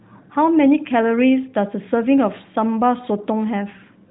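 No technical faults can be heard in the speech, which carries the narrowband character of a mobile call, with nothing above about 3.8 kHz and only the light coding texture that fits the AMR-NB codec at 12.2 kbps.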